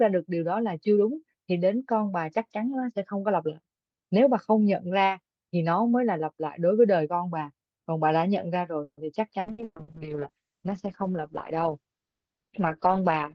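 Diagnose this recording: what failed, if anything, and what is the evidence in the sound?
Network stage, call audio freeze. From 8.83 to 9.06 s the speech stops moving forward. About 140 ms is filled by the receiver stretching the last sound into a fading buzz, and it then drops to roughly 70 ms of silence before the talker resumes exactly where they left off. The likely cause is packets held up in transit that emptied the jitter buffer. Nothing is lost, but about 140 ms of extra delay is inserted.

Network stage, repeated packet loss (robotic sound). Between 9.4 and 9.91 s there are four separate holes, the longest about 120 ms. Each is patched by extending the preceding sound, so 59% of that half-second is concealment rather than real speech. Around 300 ms of the original audio is actually gone. The speech comes out choppy, with pieces missing, because each patch barely ends before the next loss begins.

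Codec stage, driven by the network: a call bitrate drop. From 9.44 s to the end, the bandwidth estimate collapses and the encoder falls from 48 kbps to 8 kbps. At that rate Opus narrows its coded band from 20 kHz to about 6 kHz and quantises much more coarsely. The speech turns muffled, and it never recovers before the recording ends.

Jitter buffer stage, jitter buffer speed-up. From 12.86 to 13.18 s the buffer is holding more audio than its target, so the receiver trims short pitch-period slices repeatedly to shed delay. About 50 ms is removed in total, and playback runs at roughly 113% speed while the pitch stays the same. The speech in that stretch sounds hurried, layered on top of the already degraded low-bitrate audio.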